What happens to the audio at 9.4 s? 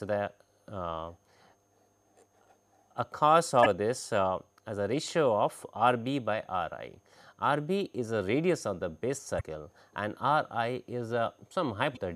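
Right around there, from 9.37 to 9.41 s, you get a quick blip, a burst of damaged data in a compressed stream lasting about 46 ms. Some of the encoded bytes in that stretch got corrupted, so the decoder misreads those frames, loses its place, and scrambles to find the next valid frame header before it can carry on. That brief loss of sync is what comes out as a short chirp or squawk.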